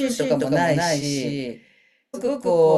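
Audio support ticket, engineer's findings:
Whole clip: speech heard twice, a second full-band copy trailing by around 200 ms at roughly equal level, no decay or room colour. Reads as a hard slapback rather than an echo. Doubled audio track, likely a second capture path running late or an edit stacking two out-of-step copies into the mix.

At 2.13 s: abrupt jump forward with a short blip. Stream segment skipped. Likely one segment of the segmented stream failed to load, and the player resumed on the next, dropping that stretch of programme.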